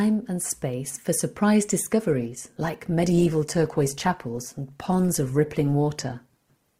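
An adaptive stream at a lower bitrate takes over at 2.09 s, right after "and space for surprise", and holds to the end of the clip. The player switched to a leaner version of the stream when the connection slowed, so the switch is abrupt but leaves no gap. From that point there are more codec artefacts, which fits a drop from roughly 64 to 16 kbit/s Opus.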